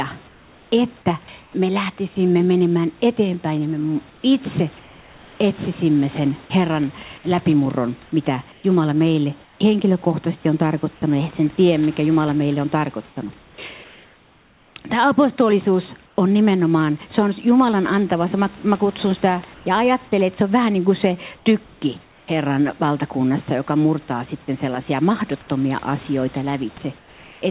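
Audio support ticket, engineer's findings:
Comfort noise in place of the background in pauses at 0.28–1.54, 4.1–5.4, 8.52–16.18, 19.54–22.28 and 26.98–27.42 s. Room noise turns steady and featureless, about 3 dB quieter by the end. Likely discontinuous transmission.

Sound dropped by the voice detector at 11.56–11.58 s. A brief bit of sound gives way to synthetic noise. The sender's detector likely read it as background.

Band-limited call path: nothing above 4 kHz, which fits narrowband G.711.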